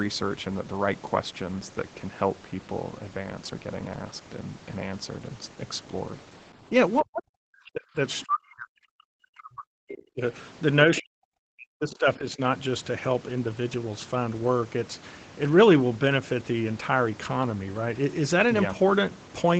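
At 6.62 s the speech dips slightly for a moment, the first sign of speech suppressed in double talk. From 7.02 to 8.0 s, 8.24 to 10.22 s and 10.85 to 12.4 s the talker is pushed down much harder, close to silence in places, in broken stretches. The likely cause is the echo canceller, unable to separate the near talker from loudspeaker echo while both sides spoke, turning everything down.

Inside the last suppressed stretch, at about 10.95 to 11.02 s, a brief scrap of the other side's voice leaking through can be heard, well below the talker's level. It is a short fragment, likely residual loudspeaker echo that the canceller failed to remove from the microphone signal before it went out. The whole clip is band-limited to 8 kHz, consistent with the call codec path.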